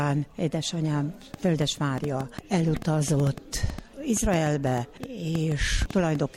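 From 1.34 s to 6.16 s a train of clicks ticks and pops over the sound at about five per second, on an uneven pace, some thirty in all. Each click has much the same sharp shape, stands well above the surrounding audio, and carries on through quieter moments too. The likely cause is an outside pulse source, such as electrical interference from nearby equipment or a faulty connection or power supply, repeatedly injecting brief spikes into the signal.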